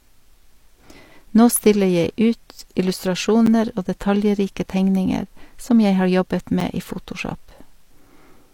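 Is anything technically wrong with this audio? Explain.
Yes. There are two blocks of digital silence in the speech, at 3.46 s and 6.60 s. Each lasts 10 ms. The sound cuts out and returns with no fade. That happens when the output buffer isn't filled in time. Each gap is heard as a tick or dip rather than as silence.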